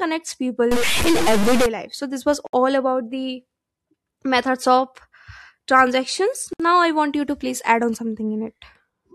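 A stuck bit runs from 0.72 to 1.66 s: the speech picks up distortion, with noise filling the quieter moments. This likely comes from one data bit held fixed at 0 or 1, so about half the sample values are pushed off by that bit's weight.

A gap at a join of encoded pieces opens at 2.47 s, a silence of about 67 ms between "this was" and "about the", and again at 6.53 s for about 64 ms. They fall 4.0 s apart, where separately encoded pieces were joined with each one's start delay and end padding left in, so the speech stops abruptly and then carries on.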